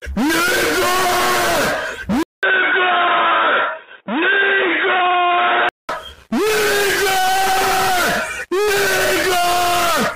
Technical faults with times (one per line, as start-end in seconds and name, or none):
2.23-5.89 input switched to a poorer device